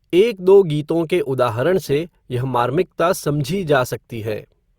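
At 1.6 s the adaptive stream drops to a lower bitrate and stays there to the end: the connection slows, so the player switches to a leaner encode of the same speech. The step sounds like a move from roughly 64 to 32 kbit/s Opus. The switch is abrupt but gapless. From that point codec artefacts grow more audible, and the spectrum still reaches up to 20.4 kHz.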